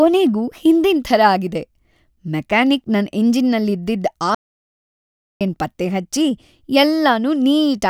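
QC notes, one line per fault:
4.35–5.41 s, audio dropout to silence: the speech stops abruptly mid-flow and the next 1.06 s is silence, with no room tone, hiss or breath underneath, before the sound comes back in. That dead-flat floor separates it from a natural pause or a noise gate, which would leave some background or fade. The input was likely lost while the recorder kept writing silence, so whatever was said in that second is gone.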